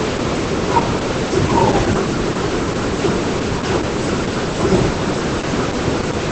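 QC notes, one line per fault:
Throughout: Opus voice compression. The speech has nothing above about 8.6 kHz and a muffled, hoarse, faintly robotic texture from heavy, coarse excitation coding in SILK's linear-prediction mode, which fits around 10 kbps. Unlike a plain low-pass, the voice itself sounds rough and synthetic.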